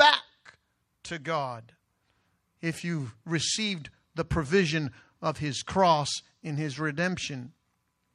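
No technical faults can be heard anywhere in the speech.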